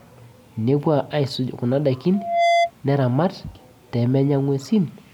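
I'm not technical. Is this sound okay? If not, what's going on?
No. From 2.13 to 2.71 s there is loudspeaker feedback squeal. A microphone picked up its own loudspeaker. One tone, near 687 Hz, kept feeding itself. It swells over about a third of a second into a squeal louder than the speech.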